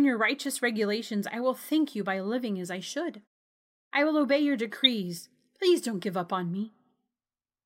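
At 4.84 to 4.87 s, just after "I will obey your", a corrupt frame was decoded: flipped bits gave misread gains and codes, placing energy at wrong frequencies. It sounds like a brief chirp-like burst peaking near -5 dBFS, spanning what suggests roughly two frames.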